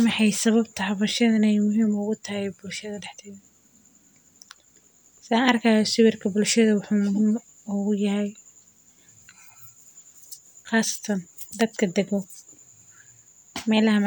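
Speech recording with no audible technical faults anywhere in the clip.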